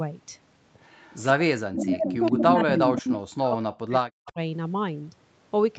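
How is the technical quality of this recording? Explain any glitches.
The recording has two recurring call-path faults that damage the speech, heard over audio band-limited to 8 kHz by the call path.

Echo leak at 0.83–1.2 s, 1.81–3.2 s and 4.25–4.32 s: a far-end echo canceller likely let loudspeaker pickup return, so a copy arriving 175 ms late trails the speech. It is faint, about 30 dB and 25 dB down, except in the middle stretch, where it reaches only about 5 dB below.

Speech suppressed in double talk at 1.36–3.08 s and 3.27–4.39 s: the echo canceller likely mistook overlapping talk for echo and clamped down, so the voice drops by as much as roughly 40 dB, for about 1.5 s and 1 s in total.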